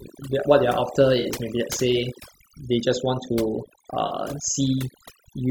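Overdone noise removal runs through the whole speech clip. Frequency bands near the estimated noise floor are pushed down hard, taking quiet speech detail with them, so the background drops and breaks up into twinkling specks.

AAC frame loss with concealment occurs at 1.20 to 1.26 s and again at 4.06 to 4.11 s. Each gap is about 43 ms, which fits two lost frames. The decoder fills it from the last good spectrum, producing a brief smeared, noisy, phasey patch.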